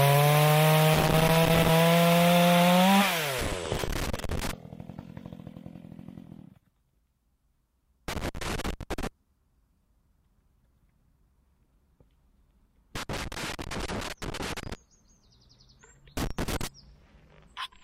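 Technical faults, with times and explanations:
0.94–1.69 s, 3.39–4.51 s, 8.08–9.07 s, 12.95–14.75 s and 16.17–16.67 s: loose connector crackle. Each burst is an irregular scratching crackle, lasting from half a second to nearly two seconds. A worn or dirty contact is making and breaking as it shifts. Each break chops the signal into fragments, and any DC on the line snaps in as pops. The bursts return at uneven gaps.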